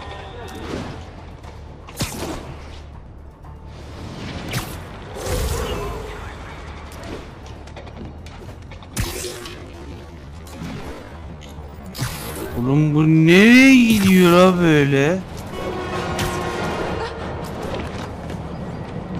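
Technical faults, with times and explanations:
9.03 to 15.07 s, time-stretched section: the pace drops abruptly to about 0.56 times normal speed while the pitch stays exactly where it was, so this stretch drags before the original pace snaps back. The likely cause is software lengthening this passage to fill a longer slot, preserving pitch by repeating short overlapping pieces of the waveform. Those repeated fragments stretch the timing and make the passage drag.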